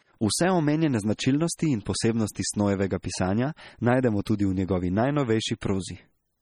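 MP3 compression runs through the whole recording. The speech sounds watery and swirly, and s sounds break into metallic chirps. This heavy damage is likely from an encoder starved of bits, which fits a low rate around 32 kbps.

Pre-echo comes at 2.35, 3.03, 4.25 and 5.61 s. Before each sharp attack, a short hiss of 11 to 16 ms leaks in. The codec spreads the noise meant for the loud onset across its whole block, so each attack sounds soft and smeared.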